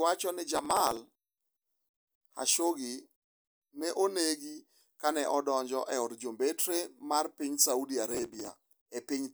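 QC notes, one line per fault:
0.55–1.20 s and 8.08–8.81 s, processor overload crackle: just after "wacho ni", and again near the end, the speech turns gritty and torn for well under a second each time. The processor misses a few dozen buffer deadlines over a short stretch, each buffer only a fraction of a millisecond long, and each missed slot is skipped rather than refilled. Unlike a network dropout, which leaves separate gaps or repeated fragments, these tiny hard-edged cuts are dense enough to fuse into crackle.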